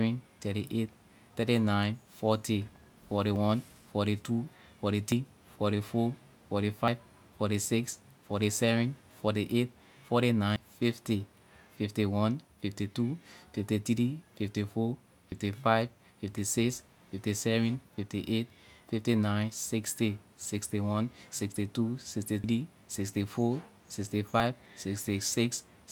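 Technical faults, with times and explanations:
3.36, 5.12, 6.88, 10.56, 15.32, 22.44 and 24.4 s, dropped buffer (overrun): at each of these points the speech jumps forward, with no gap of silence, as a small piece of audio is simply missing and the sound on either side butts together. The losses are roughly 40 to 100 ms, the longer ones at 5.12 and 10.56 s. This is likely the capture side failing to read its buffers before they were overwritten.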